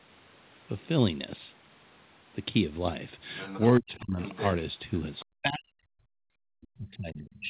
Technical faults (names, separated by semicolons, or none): other side's voice leaking through; speech suppressed in double talk